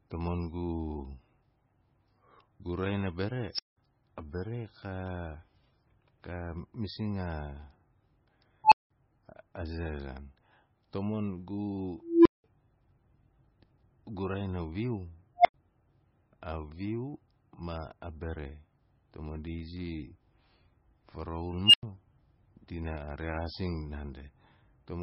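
Throughout the 25 seconds of speech, the top end stops dead at 10.5 kHz, and the sound is watery and swirly, with chirpy, metallic sibilants and smeared consonant onsets. This is heavy MP3 compression, likely from encoding at a very low bitrate, around 18 kbps. Starved of bits, the encoder discards everything above the cutoff and drops weak spectral lines that flicker from frame to frame.

Five times an unstable filter fires: a recursive filter whose output runs away, swelling into a loud tone that clips, then overflowing into silence until it resets. At 3.44 s, just before "a bare", a high whistle near 5 kHz builds over 141 ms, followed by 186 ms of silence. At 8.64 s a tone near 1 kHz builds in 78 ms and leaves a 186 ms gap. At 12.01 s a low hum near 300 Hz builds slowly, over 244 ms, again before 186 ms of silence. At 15.38 s (about 700 Hz, 70 ms build) and 21.64 s (about 3 kHz, 94 ms build), the dropout after each is shorter, 93 ms.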